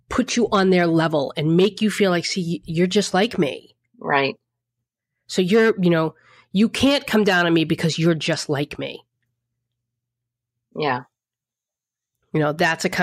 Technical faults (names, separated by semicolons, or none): none